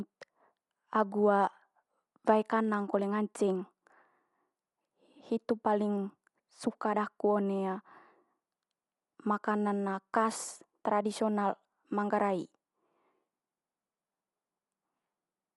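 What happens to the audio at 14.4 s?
At 14.4 s the speech sounds dull and band-limited, with rough, fluttering noise around tonal parts. Nothing is heard above 11.5 kHz. This runs through the whole clip. The likely cause is Dolby Digital compression at a low bitrate, around 64 kbps. The encoder narrows the band and leaves many frequency lines without detail. The decoder fills them with noise.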